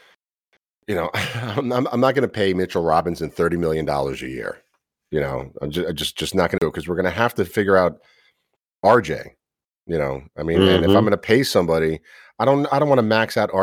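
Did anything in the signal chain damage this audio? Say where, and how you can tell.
Yes, at playback. Around 6.58 to 6.62 s there's a CD skip: a very short mute, a few tens of milliseconds, before the speech picks up from a different point. A knock or a flaw in the disc made the laser jump onto another turn of the spiral, and it carried on from there.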